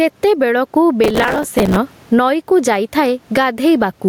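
A speech recording where the level never sits still, with a swing of about 15 dB, so loud and quiet passages end up squashed close together. This is gain pumping. The likely cause is a microphone gain set far too high, with a fast limiter or compressor clamping down on every peak and releasing in the gaps. The room noise is itself low, about 43 dB below the speech. From 1.04 to 1.77 s a gritty, tearing crackle rides over the sound and then stops. This is processor overload crackle: the processor fell behind and missed about 70 deadlines for very short audio buffers, a few milliseconds each. Each miss was filled by replaying a scrap of old audio with hard edges, and the rapid run of those splices is heard as the burst of crackle.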